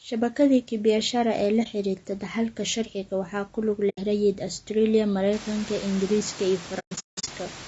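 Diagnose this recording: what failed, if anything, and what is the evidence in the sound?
Low-delay AAC compression runs through the whole recording, at the codec stage. The speech sounds rough and grainy, with a noise floor filling the gaps between pitch harmonics and a top band that sounds thin and synthetic. This is likely the short-frame AAC-ELD used in video calls. Its short frames resolve harmonics poorly and spend bits inefficiently. The plainly audible damage fits a rate around 32 kbps.

AAC frame loss with muting occurs at 1.63–1.66 s, 3.89–3.98 s, and across 6.79–7.29 s. This is a network-stage fault, with the decoder concealing the loss. The first gap fits a single lost frame and the second about four. In the last stretch about 380 ms is missing in broken runs, the longest roughly a fifth of a second. The decoder zeroed the lost spectra, so the overlapping windows fade each hole out and back in with soft edges.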